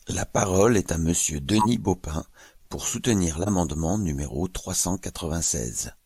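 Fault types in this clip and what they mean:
Corrupt frame decoded: bits inside compressed speech frames were damaged, and the decoder played them as valid. The misread gains and spectral codes put energy at the wrong frequencies for each bad frame's span. There are three brief glitches. The longest, at 1.50 to 1.66 s, covers a few frames and peaks at about -5 dBFS. Shorter ones come between "pour soutenir" and "numéro trois cent" at 3.42 to 3.50 s and after "numéro trois cent" at 5.39 to 5.47 s, each about -10 dBFS.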